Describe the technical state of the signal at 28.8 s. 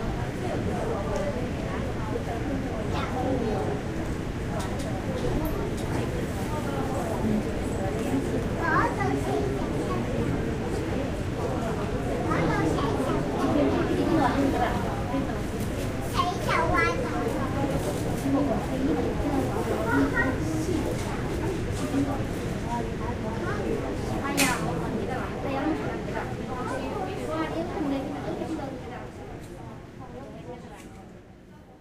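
At 28.8 s the signal is intact, with no audible dropout, distortion, clipping or other fault at that point.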